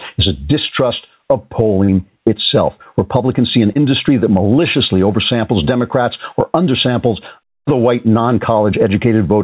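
Throughout the speech, the level pumps, a swing of roughly 15 dB. This gain pumping likely comes from excessive input gain driving a fast limiter.

At 1.84 s, just after "is a distrust of", short concealed packet loss occurs. About 40 ms of audio is missing. The receiver papers over it by extending the preceding sound, heard as a brief smear. At 3.72 s, between "see an" and "that maliciously oversamples", another gap of about 40 ms is patched the same way. It gives a short wobble in the narrowband, 4 kHz-limited call sound.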